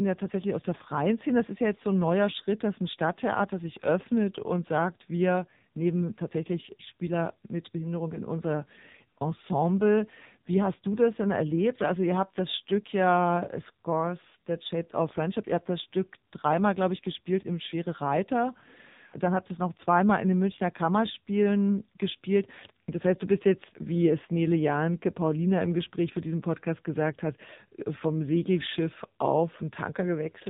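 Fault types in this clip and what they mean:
AMR narrowband mobile codec: speech throughout sounds thin, buzzy and synthetic, with nothing above 4 kHz, which points to a low-rate mode near 6.7 kbps. A mobile codec rebuilds each 20 ms frame from a vocal-tract model excited by sparse pulses, so heavy bit starvation leaves this artificial edge.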